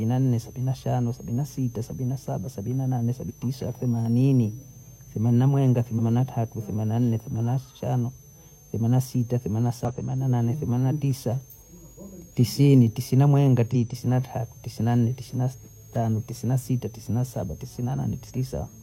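A switching supply whistle runs under the speech for the whole clip: a high tone wandering between about 5.56 and 6.73 kHz, roughly 30 dB below the speech. It comes from a switching power supply cycling in an audible burst mode or beating with another one.

Damaged data in a compressed stream produces short glitches, each around 50 to 60 ms, at 3.25 s after "sabina saba sabina nane", 5.95 s after "themanina mwenga", 9.85 s, 13.70 s after "tisini tisina mwenga", and 18.25 s. At each one, corrupt frames make the decoder lose sync.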